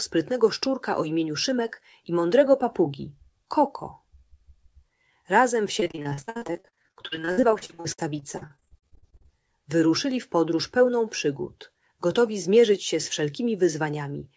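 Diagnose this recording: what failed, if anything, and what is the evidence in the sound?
Network stage, and it's repeated packet loss (robotic sound) from about 5.80 to 9.28 s. Across that stretch you get dozens of short dropouts, the longest around 61 ms, and roughly 40% of the span is concealment rather than real audio. The jitter buffer keeps stretching the last good bit of sound to plug each hole, so the passage goes choppy with pieces missing. Nothing above 8 kHz anywhere, which fits a wideband call codec like G.722.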